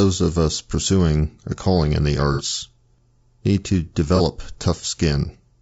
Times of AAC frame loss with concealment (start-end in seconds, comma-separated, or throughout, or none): 2.33-2.42, 4.16-4.21